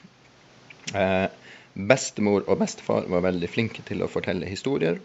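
There are no technical faults to describe; the speech sits about 29 dB above the room's own background noise throughout.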